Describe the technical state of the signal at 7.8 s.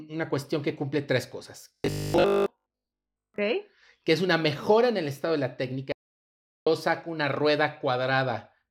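At 7.8 s the speech signal is intact, with no audible fault at that moment.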